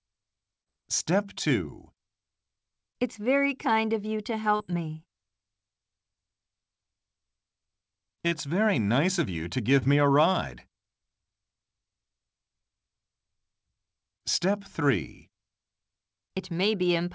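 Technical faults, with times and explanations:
0.62–0.68 s, 4.56–4.62 s, 8.28–8.33 s and 9.79–9.83 s, short concealed packet loss: at each of these four points a brief stretch of the call arrived too late for the decoder, which fits about 40 ms missing in the first three and about 20 ms in the last. The receiver covered each gap by extending the preceding sound, pitched or as shaped noise, and faded back into the real signal, so each point is heard as a short smear or wobble.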